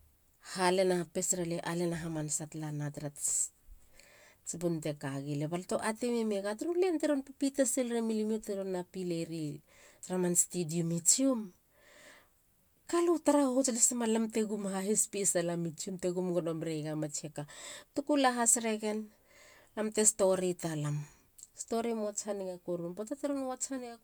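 No technical faults are audible.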